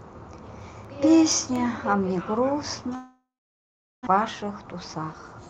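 CD scratch ticks appear between 0.61 and 1.79 s: six short clicks, none longer than about 2 ms. A blemish on the disc destroyed more data per rotation than error correction could rebuild, so the player patched or muted those samples, leaving evenly spaced ticks.

A long network dropout follows from 2.95 to 4.09 s. The last sound smears into a fading buzz, then about 0.76 s of silence, and the speech resumes with roughly 0.88 s missing. The likely cause is a stall in packet arrival, which shifted the playout delay by about a fifth of a second.

A jitter buffer speed-up runs from 4.17 s to the end at 5.49 s. Holding surplus delay, the receiver repeatedly cut short pitch-period slices, about 150 ms in total, so the speech plays 11% faster at unchanged pitch and sounds hurried.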